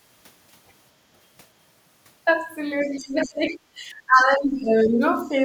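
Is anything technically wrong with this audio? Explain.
Yes, there are two faults in this speech clip, both pointing to an echo canceller struggling with a loudspeaker.

Other side's voice leaking through appears from 2.82 to 3.28 s, roughly 25 dB below the talker, and again briefly from 3.48 to 3.53 s, around 30 dB down. A second, faint voice sits underneath, likely far-end loudspeaker sound the canceller failed to subtract. Unlike suppression, this adds sound rather than removing it.

Speech suppressed in double talk runs from 2.84 to 5.02 s, with the talker's level dipping by as much as about 20 dB over roughly two seconds, and once more, milder at around 5 dB, from 5.25 to 5.37 s. The likely cause is the canceller, unable to separate both voices, attenuating everything. What sets it apart from an ordinary level drop is that it happens while the far side is playing on the loudspeaker.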